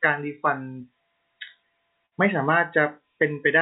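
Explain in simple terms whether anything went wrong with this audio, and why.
A burst of packet loss hit the call at 2.06 s, when a short run of audio data arrived too late or not at all. The receiver stretched and faded the last sound for about 55 ms, then skipped ahead, losing about 60 ms of speech by 2.15 s.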